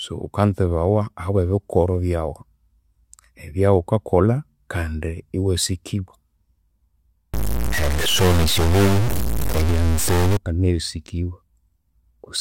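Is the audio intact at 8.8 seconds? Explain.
No, 8.8 seconds falls inside a stretch from about 7.34 to 10.37 s where the speech turns harsh and buzzy, with gritty noise filling the gaps between sounds too. That's a stuck bit, likely one data line held at a fixed value, so about half the samples jump by that bit's weight. It's a fairly high bit, a step of roughly -15 dBFS, which is why even the quiet moments get loud hash.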